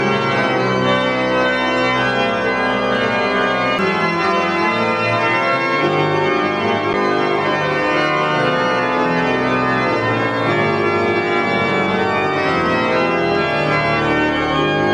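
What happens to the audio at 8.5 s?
Nothing goes wrong at 8.5 s; the audio plays through that moment intact, with no dropout, click, glitch or other fault.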